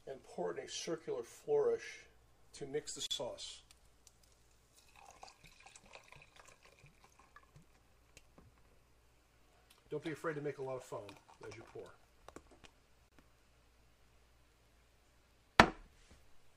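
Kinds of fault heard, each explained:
Gap at a join of encoded pieces: separately encoded segments joined untrimmed leave encoder delay and padding, opening gaps near 3.06 s (about 44 ms) and 13.09 s (32 ms), ten seconds apart.
Dropped buffer (overrun): audio jumps ahead without silence at 8.93 s, 12.29 s and 14.54 s, losing roughly 5, 20 and 10 ms; likely samples overwritten before being read.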